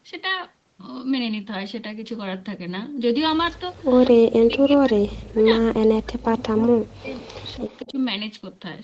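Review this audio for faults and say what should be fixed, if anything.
Speech suppressed in double talk: the speech dips at 3.6–3.86 s (about 15 dB), nearly vanishes from 4.11 to 7.18 s (about 40 dB down, roughly three seconds), and dips again briefly at 7.57–7.65 s and 7.84–7.97 s (about 10 dB). On a waveform these show as sudden envelope collapses; on a spectrogram the harmonics fade out across the band. The likely cause is an echo canceller that mistook both people talking at once for its own loudspeaker echo and attenuated everything. To prevent it, tune the canceller's double-talk detection so near-end speech keeps priority.

Echo leak: from 7.21 to 7.93 s a faint copy of the speech trails it by 193 ms, at about 25 dB below the direct sound. A spectrogram shows a dim, time-shifted replica of the harmonic pattern, and the waveform carries a low-level ghost after each burst. This is likely residual loudspeaker pickup that the far end's echo cancellation did not fully remove. 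To prevent it, improve echo cancellation or use a headset on the loudspeaker side.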